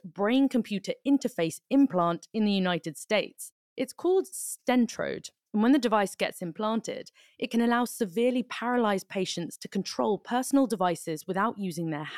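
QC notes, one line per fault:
Nothing stood out on listening to the speech in this clip.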